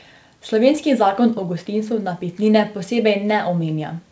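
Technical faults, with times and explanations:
No technical faults detected.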